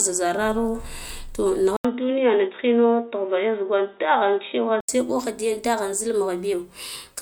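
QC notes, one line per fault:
1.77 to 4.89 s, input switched to a poorer device: after a gap of about 80 ms the speech turns dull and boxy, with nothing above 3.8 kHz, and a faint new noise floor sits far below the speech while the loudness stays much the same. This is likely a change of capture to a narrower-band microphone or a headset call profile, whose own filtering and tone replace the original path until full bandwidth returns at 4.89 s.
5.12 s to the end, drift correction step: the speech suddenly runs about 5.7% faster and rises about 95 cents, close to a semitone, with speed and pitch moving together rather than pitch alone. This is likely clock-matching software altering the playback rate in a single step to rebalance its buffer, so the whole signal is resampled and detuned for the remaining two seconds instead of being corrected gradually.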